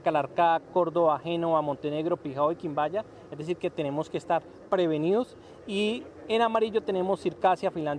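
No technical faults detected.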